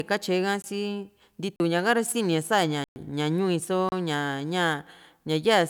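Short holes break the speech at 0.62 s, 1.56 to 1.60 s, 2.84 to 2.96 s and 3.89 to 3.92 s. These are blocks of digital silence of 19, 40, 120 and 30 ms, cutting out without fades, likely from an output buffer left unfilled.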